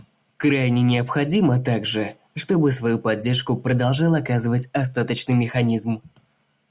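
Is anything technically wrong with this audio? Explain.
No, nothing is technically wrong with this audio.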